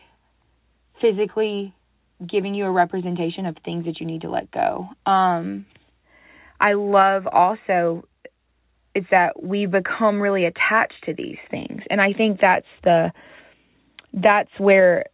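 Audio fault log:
Nothing stood out on listening to this speech recording.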